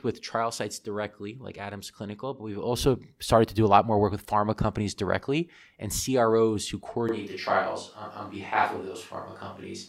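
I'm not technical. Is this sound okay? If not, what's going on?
No. At 7.09 s the speech suddenly turns roomy and hollow, with less depth in the low end, and it stays that way to the end of the clip. This is a switch to a distant microphone: the close microphone's signal most likely dropped out and a mic further away took over, so it picks up more room reflections. Loudness stays about the same, and a faint background room noise sits under the speech from that point.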